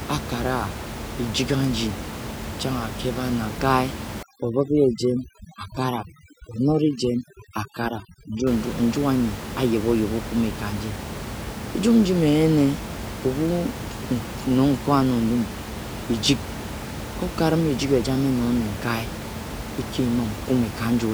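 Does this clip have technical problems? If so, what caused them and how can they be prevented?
Yes. Overdone noise removal from 4.23 to 8.47 s: the background, room noise about 10 dB below the speech, drops and breaks up into twinkling specks. Unlike dropouts, the sound never cuts out fully. Setting the noise reduction gentler, so it only lowers bands near the noise estimate, would prevent it.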